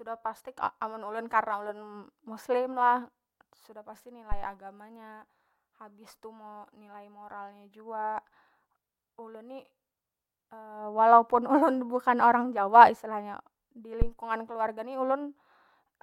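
At 4.32 s there's a phantom power thump, a low, dull thud peaking around -18 dBFS that dies away in about 34 ms, right before "nya habis tu mo". A second one lands at 14.02 s, just ahead of "keluarga ni", louder at about -11 dBFS with a 23 ms decay. Both come from a supply switching on a live input, with the voltage step punching through the coupling capacitors as a deep bump.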